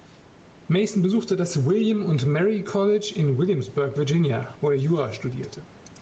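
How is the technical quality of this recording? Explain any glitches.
The recording has one clear fault, gain pumping, and it runs through the whole clip. The level swings by roughly 10 dB. The likely cause is input gain set far too high, with a fast limiter or compressor clamping down on each loud sound and releasing in the gaps. Loud and quiet parts end up squeezed together, so the speech sounds flattened. The room noise sits about 31 dB below the speech. Nothing comes through above 8 kHz, which fits an Opus call codec at 32 kbps.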